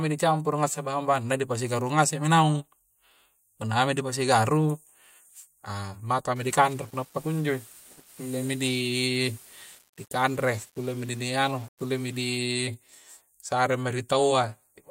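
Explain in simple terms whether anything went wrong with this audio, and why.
After "ah maka", from 6.36 to 12.38 s, the speech turns grainy and gritty, likely from low bit depth without dither: too few volume steps.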